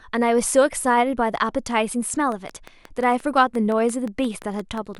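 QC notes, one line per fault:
2.32–4.96 s, train of clicks: about fifteen evenly spaced clicks at 5.7 per second, rising somewhat above the speech. Likely interference or a faulty connection or power supply.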